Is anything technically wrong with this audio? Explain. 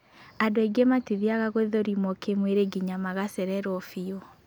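Yes, there's a problem in the middle stretch. From about 0.55 to 2.55 s the speech has wrongly applied de-emphasis: a treble-cut filter meant to undo pre-emphasis has gone onto audio that never had that boost, or it's been applied a second time. The response rolls off smoothly toward the top, ending about 8 dB down at 10 kHz relative to 1 kHz, so for those two seconds the sound turns dull and muffled, then brightens again.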